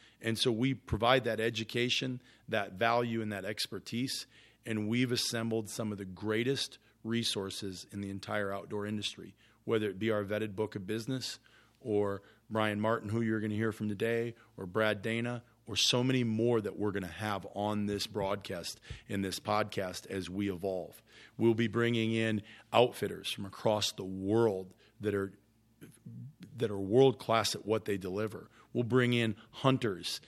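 No technical faults can be heard.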